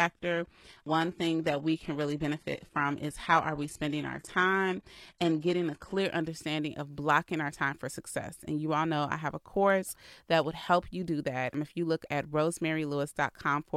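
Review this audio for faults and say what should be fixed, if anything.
From 0.0 to 6.0 s the speech has the sound of an adaptive stream starting at a low bitrate. The player opened on a low-quality version and switched up once it had gauged the connection. Until the switch, the treble is thin and synthetic and the codec artefacts are heavier, which fits roughly 16 kbit/s HE-AAC stepping to about 96 kbit/s AAC-LC. At 6.0 s, just before "understanding of blocking our", the quality jumps with no gap. On a spectrogram the opening shows a hard ceiling at 12.3 kHz with a smeared, patchy upper band that fills in at 6.0 s, while the waveform runs continuously through the switch. To prevent it, start playback on a higher-bitrate version, or buffer that version before playback begins.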